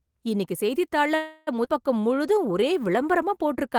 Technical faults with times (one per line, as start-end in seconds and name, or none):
1.15-1.49 call audio freeze
1.65-1.68 skip ahead
2.00-3.78 jitter buffer slow-down